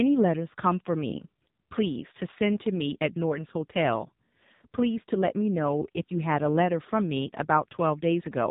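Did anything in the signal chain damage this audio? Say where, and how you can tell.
Yes. Throughout, the speech sounds heavily buzzy and synthetic and stops dead above 3.8 kHz. This points to the AMR narrowband mobile codec at the codec stage, rebuilding the voice from a coarse vocal-tract model at what sounds like about 6.7 kbps.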